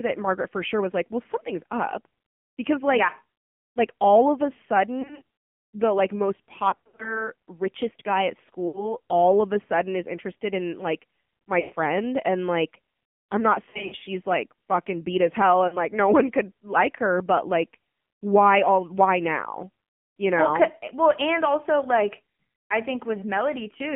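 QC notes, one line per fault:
Throughout: AMR narrowband mobile codec. The sound is squeezed into a band of roughly 150 Hz to 3.4 kHz, with nothing bright above. Plainly audible buzzy, synthetic texture comes from a vocal-tract model fed with few pulses. It points to the low 7.4 kbps mode.
5.02–5.22 s, 6.70–7.28 s, 8.68–8.95 s, 11.60–11.74 s, 13.70–14.08 s, 15.68–15.77 s: lost AMR speech frames. The decoder fills the gaps by reusing the last good pitch and vocal-tract settings at falling gain. This causes brief dips and warbles. The worst run falls between "the like most" and "richest guy at", where the sound smears and fades.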